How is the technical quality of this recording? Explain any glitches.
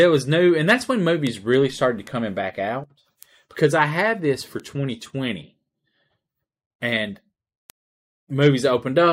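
The speech recording is marred by five bit error spikes: sharp isolated ticks at 1.27, 2.07 (after "really started to"), 3.23 (after "back out"), 4.60 (after "I had this for") and 7.70 s. Each is a flipped bit throwing one to three samples to about -10 to -22 dBFS. On a waveform each appears as a lone vertical needle, and on a spectrogram as a thin full-height line.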